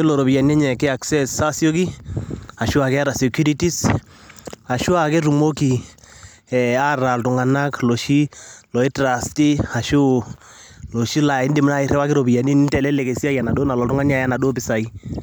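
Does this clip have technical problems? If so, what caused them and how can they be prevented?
No, there are no technical problems to prevent here.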